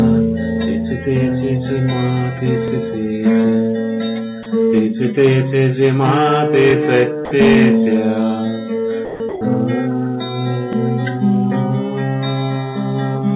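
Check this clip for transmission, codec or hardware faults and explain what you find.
Two faults are present: overlapping chunks and sound dropped by the voice detector.

Overlapping chunks occur at 2.68, 6.70 and 10.73 s, every 4 s. Each new chunk begins about 25 ms before the previous one ended, so that sliver plays twice at the join. It is heard as a brief stutter or click on a regular beat.

Sound dropped by the voice detector occurs at 4.43 to 4.46, 7.25 to 7.31, 9.05 to 9.20 and 9.29 to 9.41 s. The sender's detector likely judged the quieter sound as background and stopped transmitting, and the receiver filled each gap with comfort noise. Real sound briefly gives way to steady noise or near silence, for between 30 and 150 ms.

The call path itself carries nothing above 4 kHz, which fits a G.711 A-law connection.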